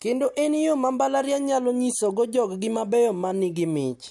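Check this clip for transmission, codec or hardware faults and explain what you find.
Nothing turned up here; the speech comes through without any dropouts, glitches or other transmission, codec or hardware trouble to point to.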